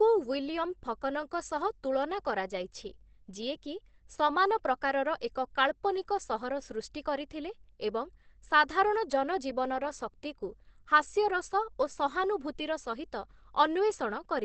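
Throughout, the speech is muffled and hoarse rather than swirly like MP3, with nothing above 8.4 kHz, likely Opus compression in speech mode at around 16 kbps.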